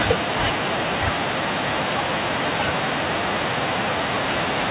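No technical faults can be heard in the speech, which has the narrowband sound of a phone call: the lowest bass is trimmed by the call microphone's high-pass filter and nothing comes through above 4 kHz, consistent with a 64 kbps G.711 mu-law codec on the WebRTC call path.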